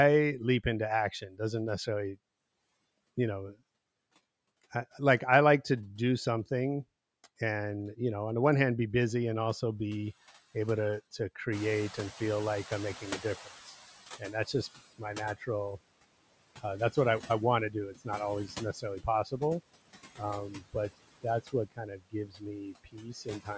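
A speech recording passed through call microphone processing, with nothing above 8 kHz, shows noise suppressor artifacts throughout. The suppressor pulls the steady background down by about 20 dB, frame by frame and band by band, so the noise floor dips in the gaps between phrases and comes back up underneath the talking. Speech cut by the noise suppressor occurs in five stretches: 1.21 to 2.16 s after "leap into" (drops up to about 13 dB, a fraction of a second affected in total), 11.19 to 13.55 s after "also be able to" (up to about 12 dB, similarly brief), 14.19 to 15.49 s (up to about 17 dB, roughly a third of a second), 16.57 to 19.42 s (up to about 14 dB, around half a second), and 20.18 to 23.49 s (up to about 21 dB, about a second in total). In each, quiet consonants and word endings were classed as noise and attenuated with the background, so they sound swallowed or faint. Around 11.5 s the room noise jumps by about 19 dB, and the noise suppressor catching up runs from 11.52 to 14.85 s. 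Its noise estimate lags the new level, so the louder background leaks through with little reduction at first, then sinks steadily over about 3.3 s until the cut settles near about 17 dB.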